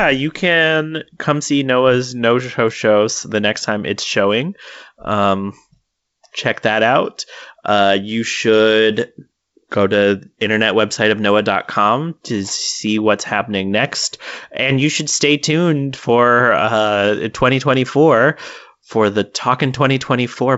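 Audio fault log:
The speech passes through G.722 wideband telephone coding at 64 kbit/s, which carries the band up to about 7 kHz, and the coding leaves at most a faint trace on the sound.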